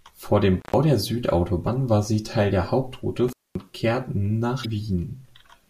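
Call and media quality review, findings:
Intermittent contact at 0.60–0.74 s and 3.28–3.60 s: loose cable or plug connection briefly opening the line, about 118 ms and 227 ms. Speech drops out with crackle at each edge, leaving faint hiss during the gap.

Damaged data in the compressed stream at 1.63–1.68 s and 4.61–4.66 s: corrupted frames in the speech stream, so the decoder misreads them, loses sync and hunts for the next header. Heard as a short chirp or blip.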